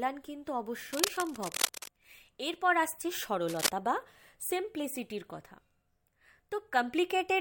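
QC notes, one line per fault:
0.92–1.88 s and 3.48–3.69 s, cable scratch noise: dense, ragged bursts of scratching rustle over the speech, first a little below it, then briefly as loud as it. The cause is likely a worn cable or connector shifting contact resistance. Unlike steady hiss or regular vinyl ticks, the bursts are uneven and short-lived.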